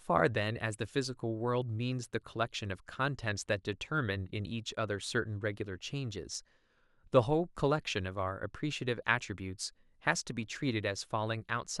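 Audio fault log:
No faults heard.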